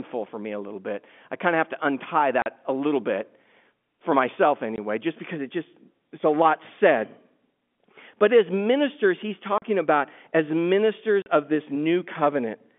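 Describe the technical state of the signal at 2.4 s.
Packet loss filled with silence: from 2.42 to 2.46 s, after "of have to untie", 40 ms of audio, likely two 20 ms packets, went missing and was replaced by silence, leaving a hard-edged hole before "a little".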